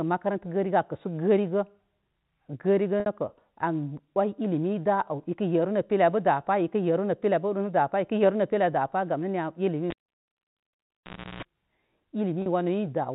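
At 3.0 s, packet loss with pitch repetition cuts out 60 ms of the speech. The receiver fills the gap by repeating the last pitch period and fading it. The result is a brief, slightly held, buzzy tone.

From 9.90 to 11.43 s, the cable is pulled and plugged in. A pop marks the pull. Near silence follows for about 1.47 s, and within it a 60 Hz mains buzz lasts about 0.34 s while only the tip makes contact. A second pop comes as the sound returns through the G.711 telephone band.

At 12.42 s, a second packet loss with pitch repetition drops 40 ms. The repeated pitch cycle again bridges the gap. It is heard as a short, held buzz before the speech resumes.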